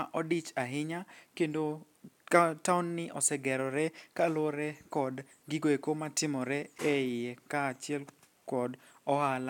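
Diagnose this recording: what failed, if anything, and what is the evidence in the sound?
Nothing failed; no fault is audible in this speech.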